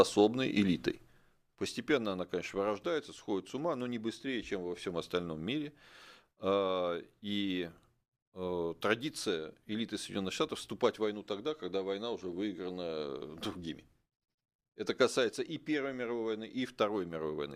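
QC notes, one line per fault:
No faults heard anywhere in the speech.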